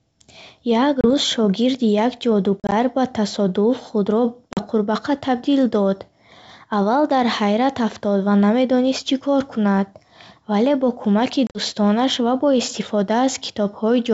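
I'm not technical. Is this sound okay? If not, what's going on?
No. This is packet loss on an ADPCM call: small chunks of the speech never arrived, and the receiving end's running guess about how loud and how the sound was moving fell out of step. You hear short holes of silence near 1.01 s, 2.60 to 2.73 s, 4.53 to 4.67 s and 11.47 to 11.59 s, each followed by a brief click or roughness as the speech comes back slightly distorted before settling.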